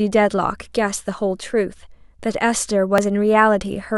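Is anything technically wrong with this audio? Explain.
Yes. Overlap between stream segments at 0.99 s and 2.98 s: two-second segments' time stamps overlap, so genuine speech is trimmed, leaving a brief click or skip.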